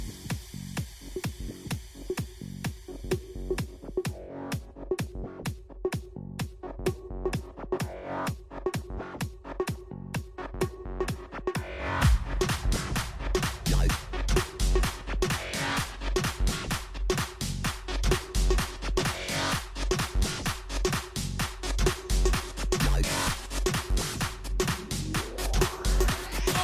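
No technical fault can be heard in this audio. Nothing in it points to a problem in how it was captured, processed or carried.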